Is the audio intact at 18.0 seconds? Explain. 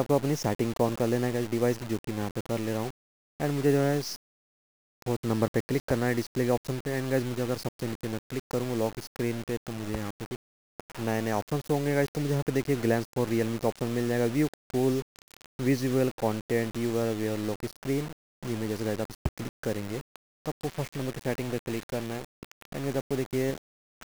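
No. At 18.0 seconds the sound is grainy and rough, and that texture runs through the whole clip. This is likely low bit depth without dither. The grit sits only about 15 dB below the sound, which fits a signal held to around 5 bits. Each sample was rounded to a coarse step with no added noise, so the error tracks the sound itself. Quiet passages turn harsh, and the distortion shifts as the sound changes.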